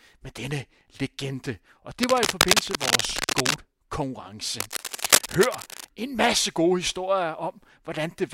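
Cable scratch noise runs through this speech clip from 2.03 to 3.54 s and again from 4.58 to 5.89 s, just before "en masse gode historier": dense, uneven rustling about as loud as the speech, likely from a worn cable or connector whose contact resistance flickered as it moved.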